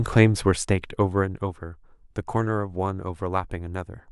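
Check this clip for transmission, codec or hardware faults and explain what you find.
No transmission, codec or hardware faults can be heard in this speech clip. Where the level moves, it rises and falls smoothly, as a fader would.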